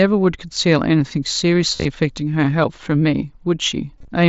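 Speech carried over a Bluetooth headset link using the mSBC codec, with its band stopping at 8 kHz, shows concealed Bluetooth headset packet loss at 1.76 to 1.85 s and again at 3.98 to 4.08 s. In each burst, most of the stretch (about 75 ms and 68 ms) went missing, with the longest unbroken gaps near 38 ms and 23 ms. The receiver bridged them by repeating short matching slices of preceding waveform, so these spots buzz at steady level. They show as evenly repeating cycles on the waveform and flat, ruled harmonic stripes on a spectrogram, with a slight warble where real speech resumes.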